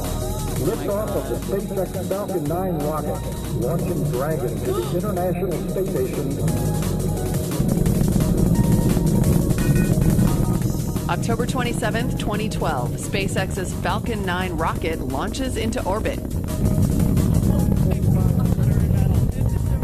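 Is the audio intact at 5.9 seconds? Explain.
No. At 5.85 s, compressed frames are skipped: the decoder never plays a short run of coded audio, so the sound jumps ahead by roughly 70 ms, which fits about three 23.2 ms frames. Unlike a dropout, there is no silent gap; the audio simply jumps at the join.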